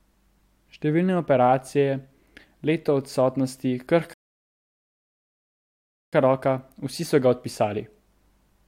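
At 4.13 s, right after "leto odsotnosti", the speech drops into dead silence for just under two seconds, then picks up at 6.13 s with "roka vsi so ga", continuing from exactly the point where it broke off. No syllables are skipped or repeated; the gap simply pushes everything later by about 1.99 s. This is a rebuffering stall: playback consumed all the audio it had downloaded and halted until more data arrived.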